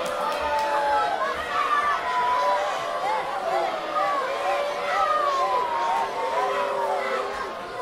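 No technical faults can be heard at any point in this audio, so there is nothing to place in time order.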